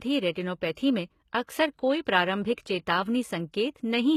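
Speech, coded throughout in a way that likely points to HE-AAC compression at a low rate, which fits a bitrate around 20 kbps. Nothing survives above 14.9 kHz, and the treble is a rebuilt copy of lower bands rather than the original, so sibilants come out gritty and metallic. Pre-echo appears at 0.32 to 0.35 s and again at 2.54 to 2.58 s: a short hiss leads each sharp onset by about 31 ms and 38 ms, because the block's quantisation noise spreads into the quiet moment before the attack, leaving it soft and smeared.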